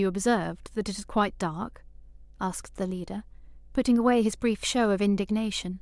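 From start to finish there's mains hum under the speech, a steady 50 Hz drone with a few low harmonics riding along, sitting roughly 25 dB below the voice. That's the power line leaking in through a ground loop or a nearby transformer.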